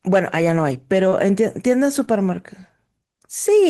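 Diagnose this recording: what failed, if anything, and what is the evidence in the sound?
Short concealed packet loss at 1.09 to 1.13 s and 2.05 to 2.09 s, a network fault: each time about 20 ms of speech arrived too late, and the receiver patched the gap by extending the preceding sound before crossfading back, leaving a brief smear.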